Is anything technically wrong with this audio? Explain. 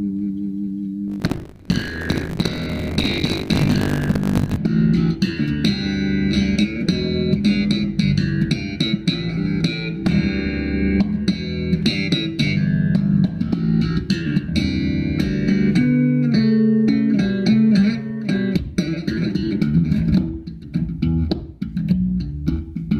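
Yes. From 1.06 to 4.57 s there is buffer tearing: the writer and reader of the audio ring buffer have drifted and cross inside each 20 ms period, so roughly a third of every buffer repeats audio from about 70 ms earlier, joined by hard cuts on both sides. It sounds like a steady robotic 50 Hz rattle riding on the signal. On a waveform, the 20 ms steps show as abrupt discontinuities; a spectrogram shows evenly spaced vertical striations and a comb of 50 Hz harmonics.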